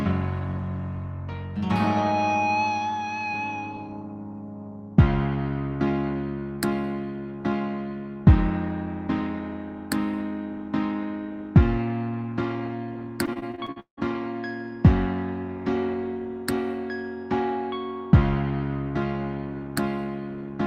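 The audio breaks up with repeated packet loss (robotic sound) from 13.25 to 13.99 s: eight holes, the longest about 173 ms, patched by extending the previous sound over nearly half that stretch, giving a choppy texture. A spectrogram shows frozen, repeated frames between abrupt breaks.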